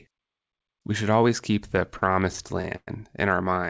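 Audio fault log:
1.68–2.89 s, repeated stalls (stutter): thirteen short holds, the longest about 110 ms and totalling about 272 ms, where the jitter buffer ran dry and the last sound was stretched until packets caught up. Nothing is lost, but the passage drags and stammers through the G.722-style band-limited audio.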